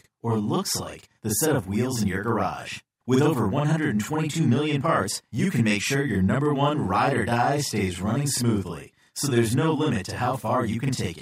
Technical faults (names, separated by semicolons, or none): channel delay (doubling)